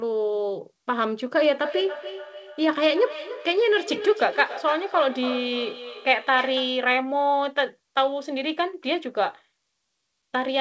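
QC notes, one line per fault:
1.48–6.94 s: feedback echo between two devices. Speech comes back roughly every 0.3 s, thinner and more ringing each pass, peaking about 11 dB below the direct speech. A nearby second device replays this microphone's feed, which its echo canceller cannot remove.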